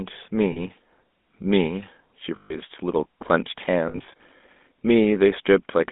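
The speech carries GSM full-rate codec damage throughout, band-limited to about 200 Hz to 3.6 kHz, with a plainly audible buzzy, gravelly roughness. This fits the 13 kbps full-rate coder, which excites its vocal-tract model with sparse, regularly spaced pulses.

Lost GSM frames occur at 0.52 to 0.59 s (a brief 40 ms metallic hold), at 2.36 to 2.56 s (140 ms of repeated, metallic ringing), and at 3.88 to 4.21 s, where 160 ms of dropouts are scattered across 320 ms, the longest run around 70 ms.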